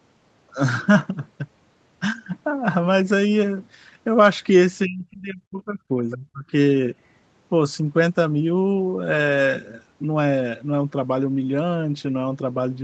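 From 4.83 to 5.9 s, the echo canceller likely could not tell the talker's speech apart from the loudspeaker echo while both sides spoke at once, so it turned the microphone signal down. This is speech suppressed in double talk: across roughly a second the speech sags and breaks up, dropping at its deepest by around 35 dB, so parts of it nearly vanish rather than just softening.

At 6.1 to 6.15 s the other side's voice leaks through. The canceller likely left a residue of the far-end playback in the microphone signal, heard as a brief foreign scrap of speech roughly 15 dB below the talker, too short to sound like more than a chopped fragment.

Straight after, from 6.14 to 6.52 s, the same double-talk suppression returns more mildly. For about a third of a second the speech dips, at its deepest by around 25 dB, and thins out before recovering. Throughout, the audio carries the Opus call path's 8 kHz bandwidth, with nothing above that.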